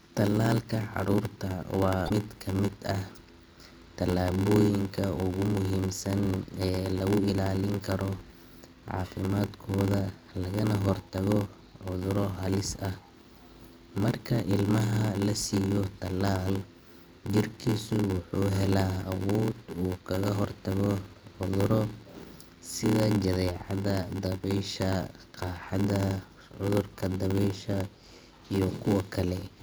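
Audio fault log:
Throughout: block size mismatch (padded). Zero-filled gaps in every block, consistent with 512-sample reads, cause an 86.1 Hz buzz and 0.861x speed. The waveform shows regular notches.
2.05–2.11 s: damaged data in a compressed stream. The decoder loses sync and searches for the next frame header, just before "mid ka mid ah".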